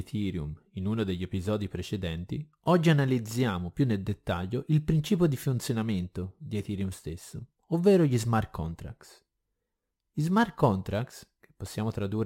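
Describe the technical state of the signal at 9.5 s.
At 9.5 s the speech carries crude rate conversion, present across the whole clip: samples were repeated without filtering, which fits a 44.1 kHz to 48 kHz change, leaving a gritty inharmonic fizz roughly 30 dB down.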